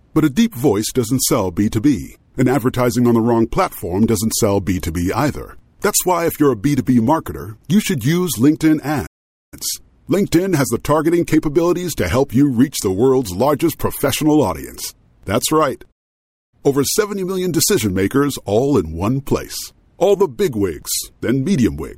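Playback stalls at 9.06 s and 15.91 s silence the speech for 0.46 s and 0.61 s, likely from data starvation, leaving blank gaps on waveform and spectrogram.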